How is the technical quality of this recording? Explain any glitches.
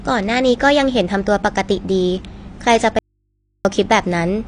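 The recording has two clear technical problems: low-bitrate compression damage throughout the speech and a brief dropout near the end.

Throughout the clip, the codec is discarding spectral detail to save data, likely AAC compression at a low rate consistent with AAC-LC near 32 kbps. Nothing survives above about 9.8 kHz, so the speech sounds dull and smeared, with a fizzy, warbling edge on sibilants.

From 2.99 to 3.65 s, the wanted signal is likely lost for about 0.66 s while the path after the break stays live: an audio dropout to a faint residue. The speech cuts off abruptly, leaving only mains hum far below normal level, then returns just as suddenly.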